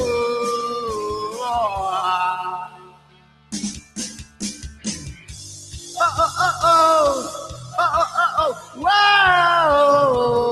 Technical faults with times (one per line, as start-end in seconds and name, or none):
0.00-10.51 noise suppressor applied to music or sounds
2.65-5.77 sound cut by the noise suppressor
7.49-7.75 sound cut by the noise suppressor
8.54-8.83 sound cut by the noise suppressor